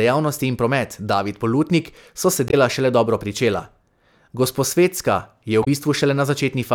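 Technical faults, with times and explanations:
2.47 to 2.54 s and 5.61 to 5.67 s: damaged data in a compressed stream. The first break falls between "so se" and "šele dobro" and lasts about 70 ms. The second lasts about 66 ms. Each is heard as a chirp, squawk, click or short hole. Some of the compressed bytes were lost or corrupted. The decoder misread those frames and lost sync. It then searched for the next valid frame header.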